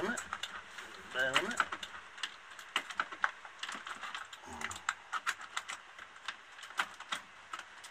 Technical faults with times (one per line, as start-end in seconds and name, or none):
0.00-4.18 doubled audio track